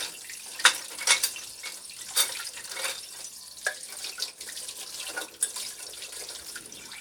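No technical faults are audible.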